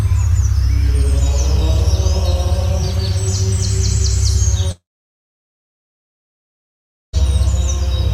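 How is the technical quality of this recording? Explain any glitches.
There's one real problem here, a long gap in the second half. From about 4.71 s to 7.15 s the sound trails off into a brief fading buzz, then goes dead quiet for roughly 2.3 s before picking up again further along, with that stretch simply gone. That's most likely a long network dropout. The stream stopped arriving, the receiver smeared the last bit of sound out for a moment, gave up, and filled the rest with silence until packets returned.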